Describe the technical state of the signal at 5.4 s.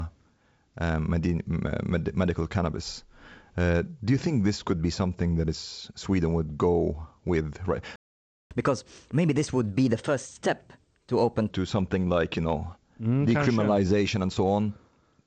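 At 5.4 s the speech is intact, carried by G.722 wideband telephone coding that behaves as expected there, with the content ending at about 7 kHz or a little above.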